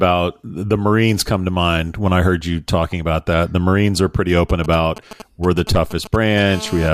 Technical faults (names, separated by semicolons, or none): GSM signalling bursts; GSM phone buzz